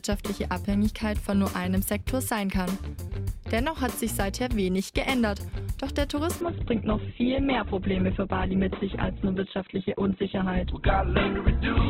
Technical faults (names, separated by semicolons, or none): adaptive stream at a lower bitrate